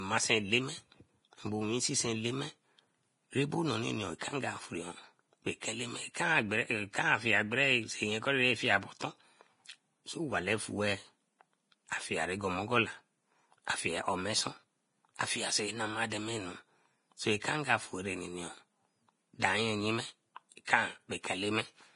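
Throughout the speech, the treble stops sharply above 10.6 kHz, and what remains up top is hissy and grainy, with roughened tones and smeared consonant attacks. This is heavy damage from likely Vorbis compression at a low bitrate, around 30 kbps, where coarsely quantised high-frequency detail turns into noise.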